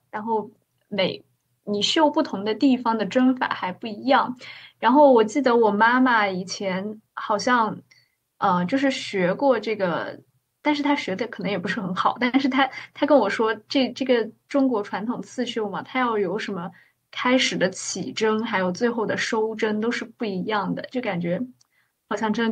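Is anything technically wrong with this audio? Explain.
No, nothing technically wrong can be heard here.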